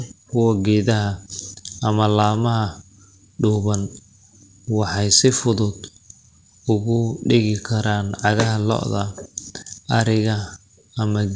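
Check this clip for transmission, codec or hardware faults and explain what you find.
One fault shows up in this speech, with the call path's bandwidth topping out at 8 kHz, which fits a wideband codec like G.722. From 2.32 to 2.36 s there's a short stall from a late packet. A packet missed its slot, the jitter buffer ran dry, and the receiver stretched the last sound by 18 ms until it arrived. Nothing's lost, but that sound hangs a touch too long with a faint buzz or dip, and everything after runs 18 ms late.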